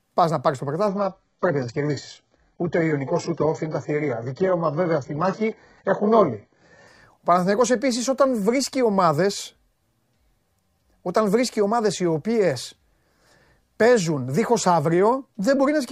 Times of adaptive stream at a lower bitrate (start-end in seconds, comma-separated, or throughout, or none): 0.87-6.87